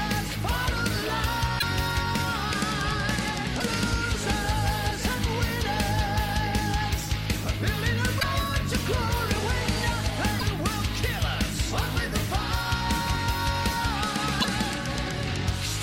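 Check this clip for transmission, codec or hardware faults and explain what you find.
The compressed stream carries damaged data in five places: 1.56–1.63 s, 3.57–3.63 s, 8.17–8.24 s, 10.36–10.43 s and 14.38–14.45 s. Each time, corrupted bytes leave the decoder unable to read the frames there, so it loses sync and hunts for the next valid frame header. Each event is heard as a brief chirp or blip of roughly 60 to 70 ms where the damaged frames should be.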